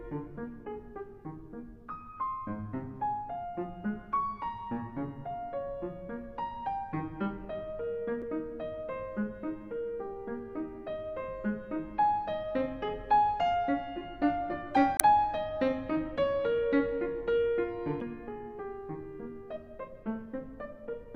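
Damaged data in a compressed stream shows up three times, at 8.19–8.23 s, 14.96–15.02 s and 17.98–18.02 s, each lasting between about 36 and 60 ms. At these points the compressed bytes no longer match valid frames, so the decoder misreads or discards them, loses its frame sync and hunts for the next usable header. Each instance comes through as a brief chirp or blip that breaks the flow of the sound before it resumes.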